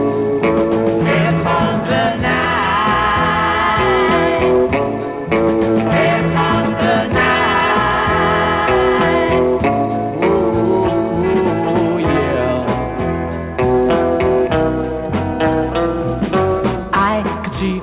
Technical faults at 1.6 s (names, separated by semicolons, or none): none